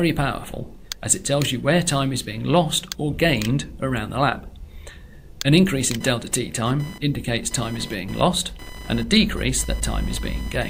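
Short concealed packet loss at 4.29 to 4.33 s: about 20 ms of audio arrived too late, and the receiver extended the preceding sound to cover the gap, leaving a brief smear. Computer activity noise from 5.93 s to the end: processor or peripheral load disturbs the shared audio ground, adding a buzzy chirp pulsing at roughly 1 kHz, about 20 dB below the signal.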